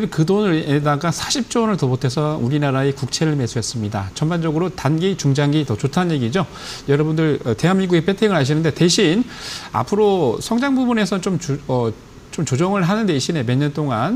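Nothing is technically wrong with this audio.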